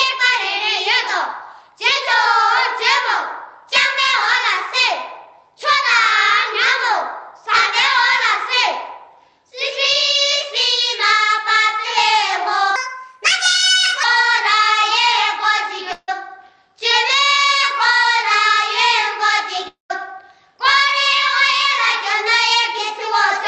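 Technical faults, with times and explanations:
12.76–14.03 s, section at the wrong speed: for about 1.3 s the audio runs 1.32 times too fast, likely from being fitted to the wrong clock, so it turns hurried and high, about five semitones up. Tempo and pitch rising together separates this from a pitch shift.
15.93–16.10 s and 19.68–19.92 s, long network dropout: about 160 ms, then 220 ms, of audio is likely lost in transit. The receiver bridges each gap with a fading buzz or hiss continuation ending in about 40 ms, then 140 ms, of silence, and the lost part never returns.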